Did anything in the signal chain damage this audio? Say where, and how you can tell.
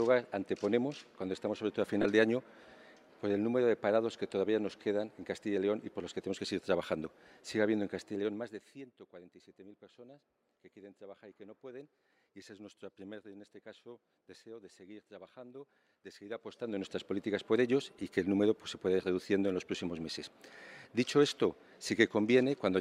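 Yes. Lost LE Audio frames damaged it on the Bluetooth LE Audio link. At 2.02 to 2.05 s, a 30 ms gap, consistent with four 7.5 ms LC3 frames, turns into a brief noisy smear. At 6.46 s a single 7.5 ms frame is concealed the same way. The decoder is filling each gap by repeating the last spectrum with randomised signs.

Zipper noise appears from 7.92 to 8.96 s. The level falls by roughly 20 dB in audible steps of about 1 dB, around 30 a second, with a tick on each step. That points to an unsmoothed gain stage at the driver or buffer level, updating the gain once per block.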